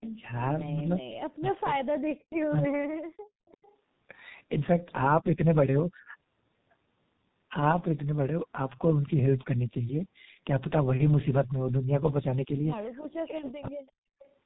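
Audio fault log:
Throughout, G.723.1 codec: the speech is muffled and hoarse, with smeared consonants. The coder's slowly updated voice model, sent in 30 ms frames at a rate that fits roughly 6.3 kbit/s, damages the speech heavily. On a spectrogram everything stops sharply at 4 kHz. Harmonics look blurred and blocky in time, and fricatives show as faint, grainy smudges instead of crisp bursts.
0.01–0.11 s, 3.48–3.74 s, 13.87–13.92 s and 14.19–14.32 s, echo leak: faint, delayed scraps of sound trail about 346 ms behind the main speech. They sit about 30 dB down, and about 40 dB down at 13.87 s. This is likely an echo canceller on a loudspeaker end letting residue through. On a spectrogram these show as weak ghost copies of earlier speech patterns, offset by roughly a third of a second. In the waveform they are small, ragged wisps.
0.73–3.43 s and 13.09–13.82 s, speech suppressed in double talk: the speech dips sharply. 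The deepest cuts are around 40 dB, totalling about two seconds in the first span and most of the second. The likely cause is an echo canceller that could not tell its own talker from loudspeaker echo while both sides spoke, so it attenuated everything. The waveform shows the envelope collapsing in chunks, and the spectrogram shows gaps and vanishing upper harmonics.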